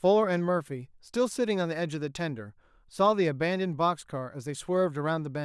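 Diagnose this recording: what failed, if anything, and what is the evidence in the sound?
Nothing in the signal chain has failed: the speech arrives as a continuous, steady signal with no dropouts, level disturbances or distortion at any stage from capture to playback.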